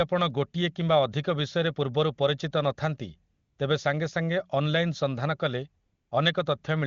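From 3.33 to 3.57 s, just before "ତେବେ ସାଙ୍ଗେସାଙ୍ଗେ", and again from 5.85 to 6.11 s, the background flattens into a smooth, even hiss that switches in and then drops out. This is AMR comfort noise. For about a quarter of a second each time, 240 ms and then 260 ms, the phone judged the talker silent and sent no speech frames. The receiver then played synthetic noise built from a rough level-and-spectrum sketch in place of the real room sound.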